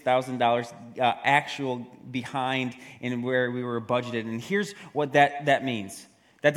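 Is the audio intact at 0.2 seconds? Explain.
Yes, at 0.2 seconds the audio is intact, with nothing there that breaks, distorts or interrupts the sound.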